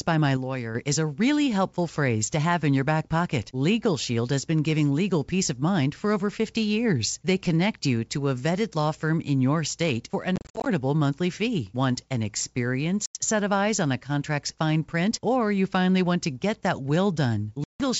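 Speech, carried over what sounds like G.722 wideband telephone coding, with clear sound up to about 7 kHz and faint band hiss. From 0.37 to 0.75 s the level drops abruptly by about 6 dB, then recovers. The likely cause is one channel dropping out. When a stereo feed is folded to mono, losing one side halves what both sides shared. Anything only on the lost side vanishes for that stretch.

There are three bursts of packet loss on an ADPCM call. From 10.36 to 10.68 s, about 190 ms of audio is missing, scattered over 300 ms in gaps of up to 50 ms. That fits around twenty lost packets. From 13.06 to 13.18 s, about 90 ms goes missing, roughly ten packets. From 17.64 to 17.81 s, about 160 ms is lost, roughly fifteen packets. Each gap is hard-edged silence. Because ADPCM codes differences, the decoder's predictor and step size drift from the sender's. Speech then returns slightly distorted, settling within tens of milliseconds.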